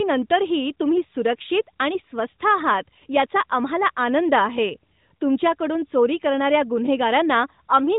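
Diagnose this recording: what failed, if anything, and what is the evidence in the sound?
Nothing failed in this recording, and the sound gives no evidence of any fault.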